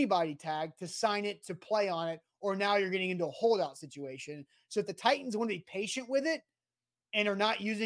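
Nothing stood out on listening to this speech recording.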